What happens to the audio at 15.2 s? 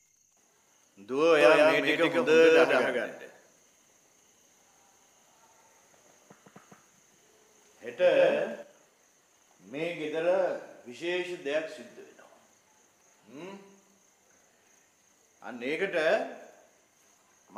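Nothing goes wrong at 15.2 s: the audio carries on intact through that moment, with no dropout, click, distortion or other fault.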